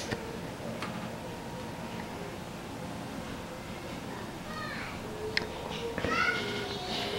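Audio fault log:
0.93–1.09 s, 2.94–3.05 s and 6.47–6.62 s: repeated frames. A 78 ms block plays twice more at 0.93 s and 6.47 s, and a 105 ms block plays once more at 2.94 s. Each sounds like a stutter, adding about 157, 105 and 157 ms. On a spectrogram the same pattern repeats side by side. On the waveform an identical segment is copied end to end.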